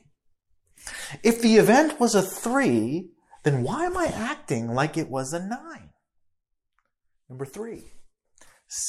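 From 4.94 to 5.92 s, right after "am I acting like", the speech shows zipper noise. The level falls by about 10 dB across that second, but the gain is updated in discrete increments, roughly 300 times a second, rather than being ramped sample by sample. Each tiny jump leaves a small discontinuity in the waveform, and at that rate the clicks merge into a fine buzzing, zipping texture that rides on the speech while the fade is in progress.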